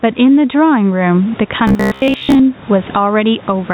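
Gain pumping runs through the whole clip. The level swings by about 15 dB. The likely cause is input gain set far too high, with a fast limiter or compressor clamping down on each loud syllable. This squashes the speech so loud and quiet parts sit close together.

Robotic sound from repeated short buffers appears from 1.68 to 2.44 s. Here the voice becomes a rigid metallic buzz at 66.8 Hz that still roughly traces the speech. This points to audio arriving too seldom, likely with the receiver filling the gaps by looping its last buffer of about 15 ms. Most of the real audio in that stretch is skipped, and the loop's repetition rate imposes the fixed buzz pitch.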